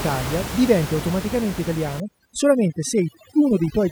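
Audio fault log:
2.0–3.91 s, overdone noise removal: after "diventi automaticamente", an over-strong noise reducer mutes bands near its noise estimate, leaving twinkling near-silence.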